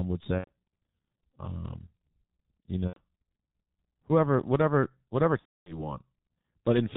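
Across the whole clip the speech sounds muffled and hoarse, with smeared consonants and nothing above 4 kHz. This is heavy G.723.1 codec damage, which fits its 6.3 kbit/s mode, where 30 ms frames and a slowly updated voice model blur detail. At 0.39 to 0.50 s and 2.88 to 3.00 s, about 90 ms of sound is lost; the last sound is stretched into a fading tone or noise and then muted on the third lost frame. Just after "whoever whatever whatever", from 5.39 to 5.89 s, about 270 ms is lost, and the sound is muted from the third lost frame onward. Each is VoIP packet loss concealed by the speech codec: the decoder stretched its last pitch and filter while lowering the gain, and the voice stays weak briefly after the packets return.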